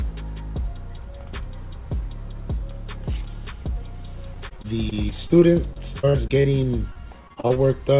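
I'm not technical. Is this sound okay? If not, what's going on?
No. From 4.34 to 7.58 s there is repeated packet loss: about 22 short dropouts, each up to 40 ms, patched by stretching earlier sound, so it turns choppy and robotic. Throughout, the call line carries nothing above 4 kHz, so the audio sounds narrow.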